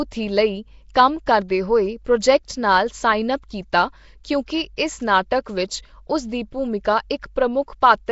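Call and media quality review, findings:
Rough, hissy halo and smeared, underwater quality on speech, full clip; nothing above 7.7 kHz. Likely Nellymoser compression: fixed two bits per sample in 256-sample blocks, empty bands noise-filled. Fits a 32 kbps stream.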